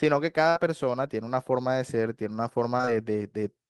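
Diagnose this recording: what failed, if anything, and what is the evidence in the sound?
Network: a burst of packet loss at 0.49 to 0.57 s. The receiver extends the last sound for about 60 ms while fading it, then resumes with 60 ms skipped.

Network: short concealed packet loss in three consecutive 20 ms holes from 2.77 to 2.89 s. Each hole is filled by extrapolation and crossfaded back, leaving a brief smear.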